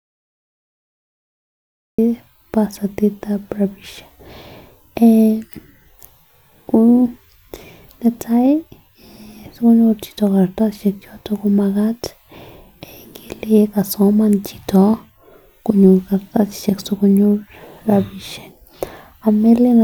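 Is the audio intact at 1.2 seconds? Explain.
No. At 1.2 s the speech lies inside a cut-off start: digital silence runs from 0.0 to 1.98 s, and the sound then begins abruptly mid-utterance, with no natural attack, because capture started late. Unlike a dropout, no audio precedes the gap.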